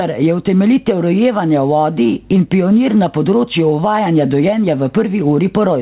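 Throughout the speech, the gain swings by around 10 dB as each loud syllable arrives, leaving loud and quiet passages squashed close together. This gain pumping likely comes from input gain set far too high, with a fast limiter or compressor clamping down on each peak. Nothing reaches above 4 kHz, which fits a narrowband telephone codec such as G.711 on the call path.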